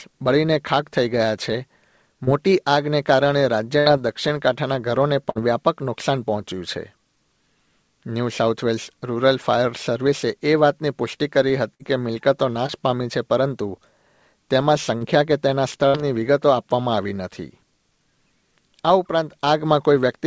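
A brief smear or wobble at 2.24 to 2.30 s is short concealed packet loss. About 30 ms of audio never arrived and was patched by extending the preceding sound. At 3.80 to 3.89 s and again at 5.30 to 5.38 s, a held buzz or fading hiss stands in for missing sound, and the audio then resumes slightly further on. This is a burst of packet loss: about 60 ms was dropped, and the receiver stretched the last sound while fading it. The same burst effect returns at 11.74 to 11.82 s. A short smear follows at 12.66 to 12.80 s, another case of short concealed packet loss, where roughly 30 ms was lost and a little extra time was added as the audio realigned. Another smear at 14.98 to 15.04 s is the same short loss, and a final burst of packet loss at 15.88 to 15.97 s gives one more held, fading patch. Throughout, nothing is heard above 8 kHz, which fits a G.722 call path.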